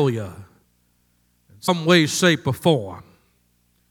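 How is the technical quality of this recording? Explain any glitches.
The speech has one glitch, from 1.63 to 1.69 s, just before "way shape or": damaged data in a compressed stream made the decoder misread those frames and resync, producing a short garbled blip.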